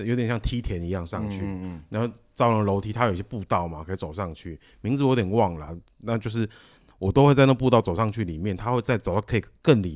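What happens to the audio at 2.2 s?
Nothing goes wrong at 2.2 s: the speech carries on intact through that moment, with no dropout, click, distortion or other fault to be heard.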